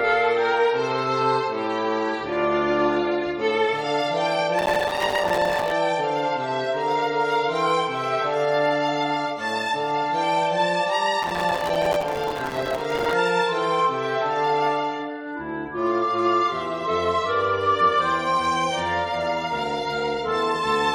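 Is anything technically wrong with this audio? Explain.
Yes. Processor overload crackle occurs from 4.59 to 5.72 s and again from 11.23 to 13.13 s. The processor repeatedly missed deadlines for buffers a few milliseconds long, leaving many hard-edged silent gaps that chop through the sound as a gritty burst of crackle.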